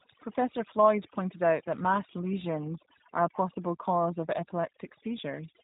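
From start to finish the background sits in near silence, broken by twinkling specks. This is overdone noise removal: a noise reduction stage was pushed too hard, so it pulls individual frequency bands far down or mutes them whenever they come close to its idea of the noise floor. The quieter parts of the speech are caught in that same cut.

Running through the whole clip as well, the speech sounds plainly rough and synthetic, with a slight artificial edge, and the top end is missing entirely, since nothing above about 3.8 kHz survives. This is the G.729 codec, here the G.729A variant, and the sound fits its 8 kbit/s rate. The codec rebuilds each 10 ms frame from a vocal tract filter, a pitch predictor and a handful of pulses, not from the waveform itself.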